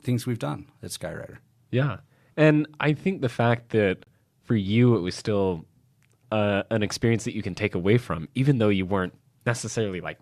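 Speech clip with a gap between stream segments at 4.04 to 4.07 s: a hard-edged 26 ms silence where mismatched segment timestamps leave a hole, though no audio content is lost.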